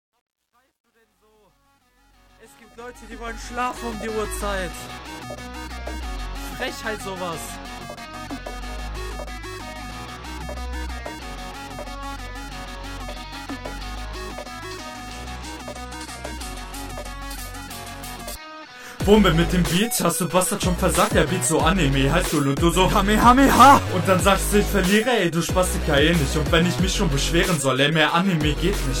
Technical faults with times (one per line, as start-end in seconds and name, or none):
0.00-3.88 truncation distortion on a fade